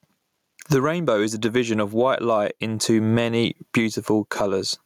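Gain pumping runs through the whole speech clip. The gain swings around 20 dB, bringing loud and soft parts closer in level and squashing the sound. Excessive gain with fast limiting is the likely cause.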